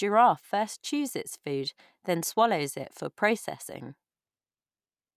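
No technical faults can be heard anywhere in the speech recording, with the signal continuous and steady throughout.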